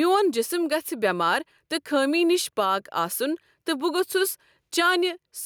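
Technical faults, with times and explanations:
Throughout, gain pumping: the level ducks about 5 dB under loud speech, likely a fast compressor riding excessive gain, not a gate cutting silence.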